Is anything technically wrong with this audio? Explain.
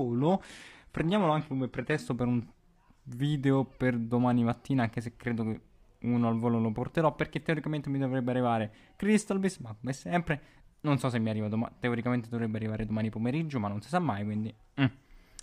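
Yes. From 0.0 to 2.0 s, the adaptive stream starts at a low bitrate. The treble sounds synthetic and artefacts are heavier, which fits roughly 16 kbit/s HE-AAC, until quality jumps cleanly to something like 96 kbit/s AAC-LC. A spectrogram shows nothing above 12.3 kHz before the step, and the waveform has no gap.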